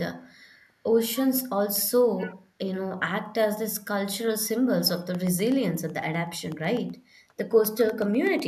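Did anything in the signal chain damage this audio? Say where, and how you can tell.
Yes. In the call-processing stage, an echo leak is the likely cause of a faint delayed copy of the speech between 2.17 and 2.35 s. It trails the original by 228 ms at a low level, roughly 20 dB down, as if a far-end loudspeaker's output reached its microphone past the echo canceller and was sent back.

At the driver or buffer stage, periodic USB or driver dropouts run from 4.90 to 8.40 s. Every 0.125 s, a fraction of a millisecond of audio is replaced with silence. This produces a regular ticking at eight per second that is heard only while there is signal.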